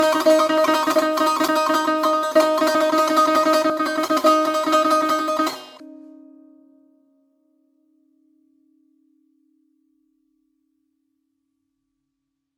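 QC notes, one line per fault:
Throughout: generation loss. The music sounds swirly, hollow and smeared, with blurred attacks. Likely about seven lossy re-encodes, which fits WMA 1 at 128 kbit/s.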